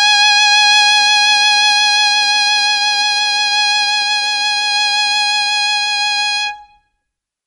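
Music clip with plainly audible MP3 compression throughout, likely from a low bitrate near 48 kbps: treble stops sharply at 11.3 kHz, and dropped weak detail leaves a watery, swirling texture.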